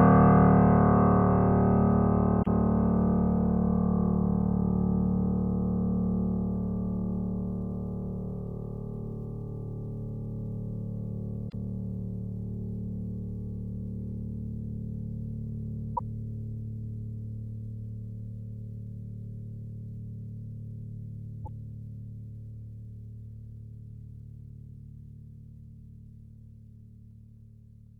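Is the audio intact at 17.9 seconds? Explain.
Yes, the music plays through 17.9 seconds with no audible dropout, click, distortion or other technical fault at that moment.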